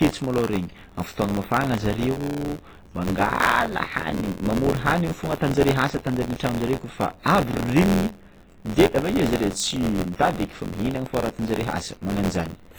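From the start, the speech carries heavy ringing, washy smearing and hiss that breathes with the signal, likely WMA compression at a low bitrate around 24 kbps. Running alongside it is a robotic buzz at 86.1 Hz whenever there's signal, classic buffer tearing, which fits a 512-sample buffer. About a tenth of each period replays audio from roughly 20 ms earlier, with hard joins on both sides. At 10.16 to 10.19 s there's pre-echo: about 32 ms of hiss creeps in ahead of a sharp attack, because the codec spread that block's noise evenly across it, leaving the onset soft.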